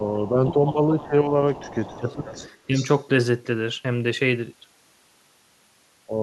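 Echo leak at 0.25 to 0.3 s: a faint copy of the speech returns about 383 ms late, roughly 20 dB below the direct voice. The likely cause is the far end playing the call through a loudspeaker, with its echo canceller failing to remove everything its microphone captured, so the residue is sent back.

Speech suppressed in double talk from 0.43 to 2.28 s: while both sides talk, the speech dips by as much as about 20 dB, for roughly a second and a half in total. This is likely the echo canceller mistaking the talker for loudspeaker echo and attenuating both.

Echo leak from 1.52 to 2.15 s, inside that suppressed stretch, brings back the same 383 ms delayed copy at about 20 dB down. Echo leak again at 2.31 to 2.57 s, quieter at about 25 dB down.

Speech suppressed in double talk at 2.67 to 2.81 s is a brief, shallow dip of about 5 dB.

Echo leak at 2.74 to 3.03 s overlaps that dip and is the strongest leak in the clip, about 15 dB below the speech, still 383 ms behind.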